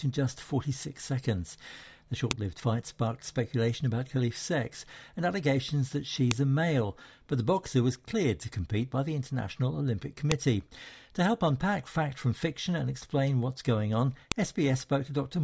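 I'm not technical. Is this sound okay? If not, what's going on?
No. There are sharp clicks at 2.31, 6.31, 10.32 and 14.32 seconds, one every 4 seconds. This is a file header played as audio. The sound was joined from 4-second pieces. Each piece's start-of-file data played as a snap.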